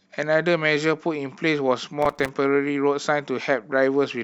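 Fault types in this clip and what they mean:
Processor overload crackle: From about 2.02 to 2.29 s the speech turns gritty and torn. That's the processor falling behind and missing its buffer deadlines over and over, roughly thirty times in that quarter second. Each miss drops a tiny chunk of a few milliseconds and leaves silence with hard edges, so the dropouts pile up into a rough crackle over the speech. It clears once the load eases.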